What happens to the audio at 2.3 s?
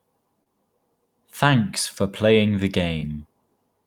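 Nothing goes wrong at 2.3 s: the speech carries on intact through that moment with no audible fault.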